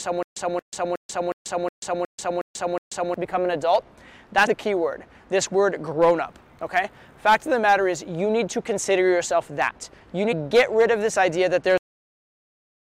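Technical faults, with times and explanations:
0.00–3.14 s, stutter with silent gaps: already under way at the start, a 0.23 s burst repeats eight times every 0.36 s with 0.14 s of digital silence between, likely a stalled stream replaying its last fragment.
4.46 s and 10.31 s, damaged data in a compressed stream: brief blips where corrupted frames threw the decoder out of sync, skipping ahead to the next valid frame header.
11.78 s, cut-off end: the sound stops abruptly mid-event and drops straight to digital silence with no decay, because the final buffers were never written or played.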